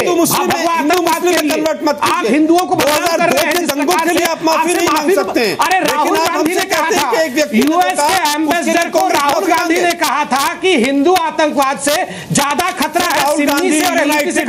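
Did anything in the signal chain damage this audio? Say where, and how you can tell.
Yes. Integer overflow runs through the whole clip. Loud peaks go about 4 dB past full scale and wrap to the opposite sign. Under half a percent of samples are hit. Each gives a violent crack. This points to an unclamped sample-format conversion.

Gain pumping is present throughout. The level swings around 5 dB. The sound is squashed. The likely cause is excessive input gain reined in by a fast limiter in call processing.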